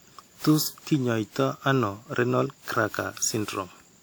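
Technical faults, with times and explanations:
Throughout, generation loss: the speech sounds swirly, smeared and hollow with blurred attacks, likely from about ten WMA re-encodes, each re-quantising on a shifted frame grid.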